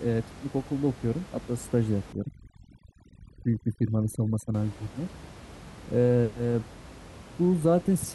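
From 2.13 to 4.54 s the background collapses into near silence dotted with twinkling specks, and the speech has its quieter parts hollowed out. This is overdone noise removal: a reducer set far too aggressively, pushing individual frequency bands down or off wherever they came close to its noise estimate. The room noise, sitting about 19 dB below the speech, was close enough that quiet speech detail was stripped along with it.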